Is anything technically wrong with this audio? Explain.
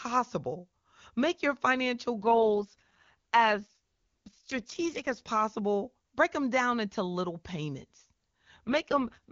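Yes. An AMR rate drop occurs twice, at 2.22–5.28 s after "your financial" and at 8.67–9.32 s after "down into little payments". The link forces the HD Voice AMR-WB codec down from about 23.85 to 6.6 kbit/s, which leaves the same band and no gap but makes the speech rough and synthetic.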